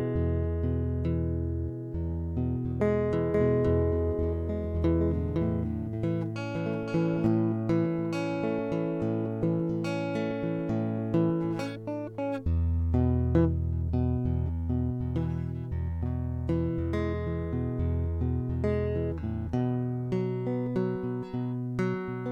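This music clip has a doubled audio track from 3.34 to 7.26 s: a full-band copy about half a second late, about 5 dB quieter, starting and stopping abruptly, likely from a second out-of-step capture. A waveform shows a weaker offset repeat, and a spectrogram shows distinct duplicate onsets with clean edges.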